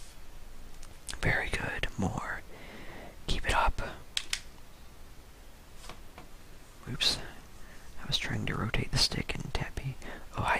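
Sample clock jitter runs through the whole clip. A few microseconds of timing error add hiss roughly 30 dB below the sound, rising on loud, bright passages.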